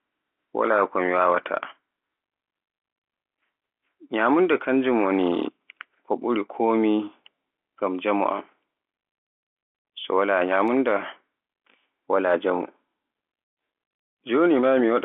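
Speech carried over G.711 mu-law telephone coding at 64 kbps, with the line passing roughly 250 Hz to 3.5 kHz, shows no technical faults.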